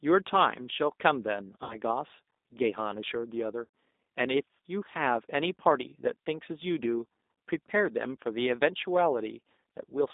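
Throughout, the speech carries the G.729 codec's signature: a narrow line band of roughly 250 Hz to 3.7 kHz, and a plainly audible rough, slightly synthetic texture from rebuilding each 10 ms frame with a filter, pitch predictor and sparse pulses. This fits 8 kbit/s G.729A.

VoIP packet loss concealed by the speech codec occurs from 1.64 to 1.77 s and again at 3.65 s. The decoder stretches its last pitch and filter into a fading buzzy tone or coloured noise, covering about 60 ms of missing audio (likely two packets) and about 90 ms (likely three).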